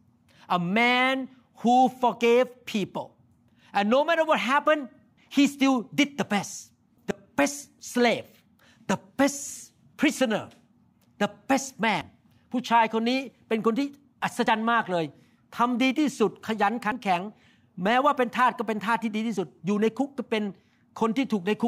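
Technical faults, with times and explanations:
2.21, 4.66, 7.11, 9.56, 12.01, 14.47, 16.92 and 19.37 s, audio missing between chunks: the speech likely passes through in 2.5 s chunks, losing roughly 50 ms at each changeover, so the sides butt together without silence and the speech skips forward at this steady interval.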